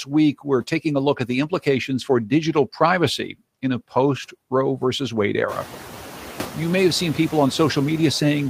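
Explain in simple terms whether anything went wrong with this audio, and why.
Throughout the recording, the background noise dips slightly in the pauses between words and creeps back up underneath the speaking, so the quiet parts never sound quite steady. These are noise suppressor artifacts. A noise-reduction step tries to guess which sounds are steady background noise and turns them down moment by moment. Here it only lowers the noise a little, so the effect is gentle, but the background keeps shifting with the speech. The room's own background noise grows noticeably louder from about five and a half seconds, though that comes from the room itself and is not a fault.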